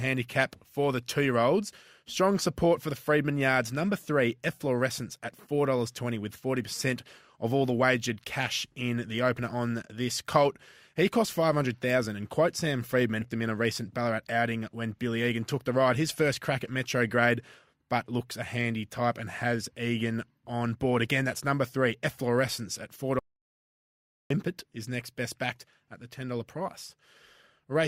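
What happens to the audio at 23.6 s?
Audio dropout to silence, 23.19 to 24.30 s. The input was likely lost while recording continued. About 1.1 s of speech becomes dead silence, without room tone.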